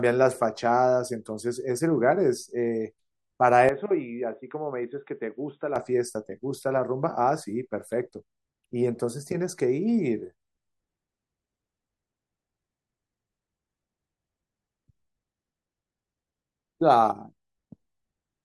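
From 3.69 s to 5.76 s the speech turns dull and boxy, with nothing above 3.8 kHz, drops a few decibels in level, and carries a faint new background noise well below the speech. The change happens with no gap at either edge, and full clarity returns at 5.76 s. The likely cause is an input switched to a poorer device, such as another microphone or a headset's call profile, with its own narrower band, tone, level and noise.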